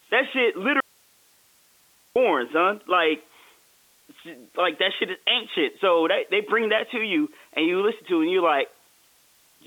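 The signal path most likely lost its input for a moment while the line after the break stayed open, producing an audio dropout to a faint residue from 0.80 to 2.16 s. About 1.35 s of speech vanishes abruptly, not by fading, and the gap holds only hiss roughly 35 dB below the normal level before the speech snaps back. That hiss carries the same narrow telephone band as the G.711 line, with nothing above about 3.8 kHz.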